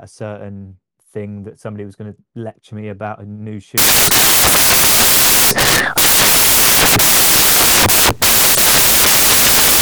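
Samples built from the wrong bytes take over this speech clip from 3.78 s to the end: the reader misassembles each sample's bytes, so the rapidly changing low bits dominate, producing loud, harsh noise that is close to white on louder passages.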